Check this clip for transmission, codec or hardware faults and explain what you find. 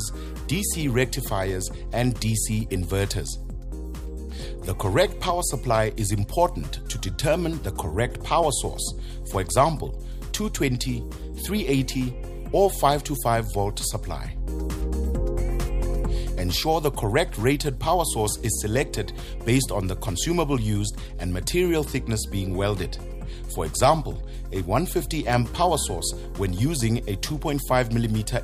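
Nothing stood out on listening to this clip.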